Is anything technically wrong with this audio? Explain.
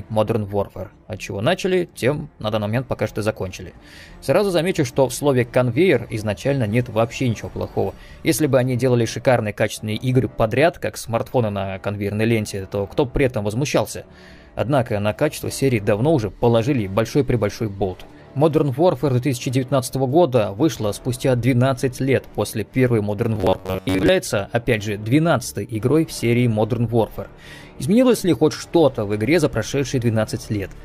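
Yes. From 23.35 to 24.08 s the sound becomes a rigid, metallic buzz fixed at 93.8 Hz, only loosely following the audio beneath. This is robotic sound from repeated short buffers, likely caused by audio arriving too seldom, so a 10.7 ms slice was replayed through most of that stretch.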